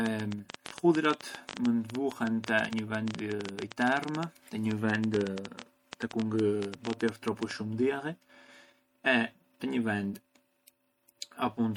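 Throughout the speech there is plainly audible MP3 compression damage: dull, band-limited treble, a watery swirl as weak spectral detail flickers between frames, and smeared consonant attacks. This points to an MP3 encoding at a low bitrate around 64 kbps starving the encoder of bits.

From 0.06 s to 7.52 s, a train of clicks runs over the speech and its pauses, around seventy similar pulses at an irregular pace averaging 10.6 per second, peaking at about 15 dB above the signal. These are likely interference pulses or a faulty connection or power supply.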